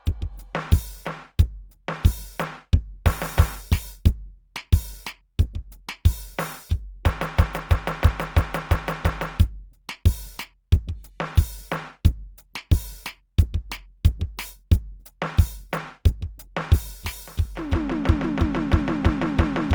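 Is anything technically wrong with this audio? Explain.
Yes. Throughout the music, tones sound rough, grainy and plainly noisy rather than clean, with a hiss-like texture where sustained sounds should be smooth. The top end still reaches to about 20.1 kHz, so the sound is not muffled. This is likely Opus compression in its music (CELT) mode. Starved of bits, the encoder keeps each band's energy but fills the detail with folded copies of lower bands or noise. The damage fits a low bitrate around 24 kbps.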